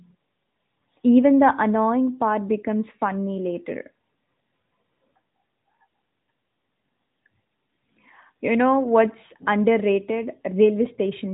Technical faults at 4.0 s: none

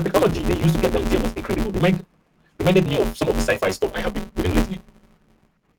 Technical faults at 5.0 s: block size mismatch (truncated)

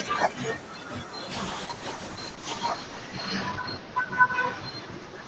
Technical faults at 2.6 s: call bitrate drop

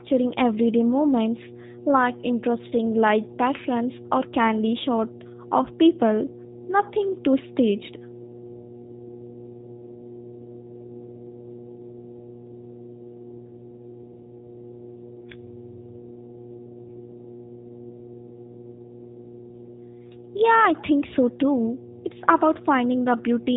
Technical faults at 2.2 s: mains hum; G.729 codec

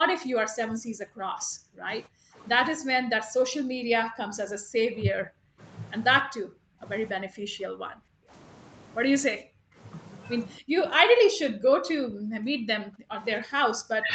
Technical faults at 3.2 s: speech suppressed in double talk

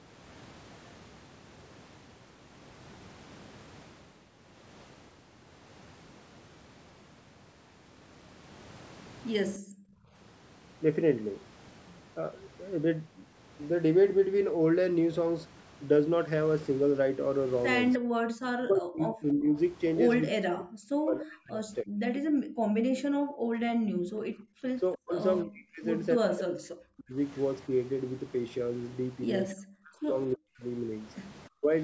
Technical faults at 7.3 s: none

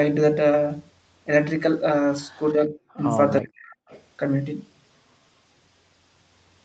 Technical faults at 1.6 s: none

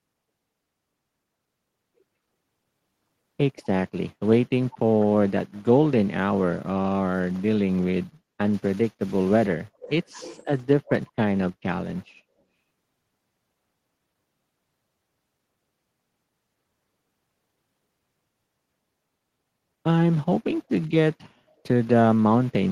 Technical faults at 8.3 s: none

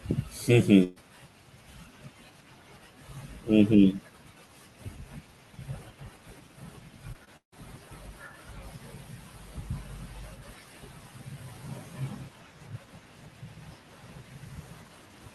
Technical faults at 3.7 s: none

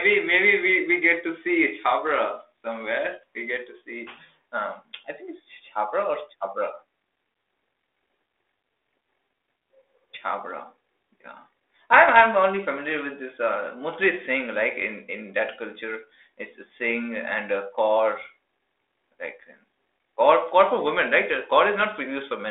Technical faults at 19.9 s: none

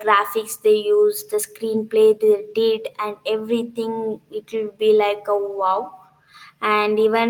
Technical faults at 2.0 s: none

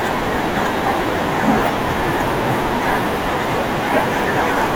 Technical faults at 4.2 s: none

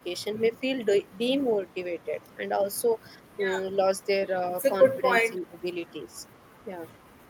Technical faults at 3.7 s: speech suppressed in double talk

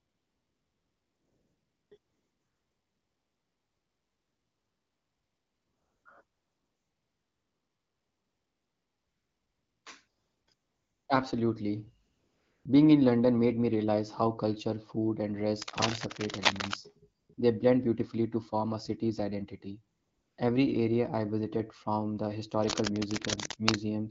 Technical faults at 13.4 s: none

